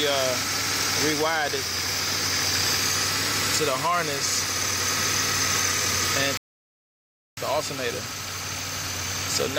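At 6.37 s there is a playback stall: the player most likely ran short of buffered data, or its output thread was held up, so nothing reached the output until it caught up. The result is an abrupt drop to silence in the middle of the sound, lasting about one second, until the audio comes back at 7.37 s. The gap is clean rather than noisy, a sudden halt followed by an equally sudden return.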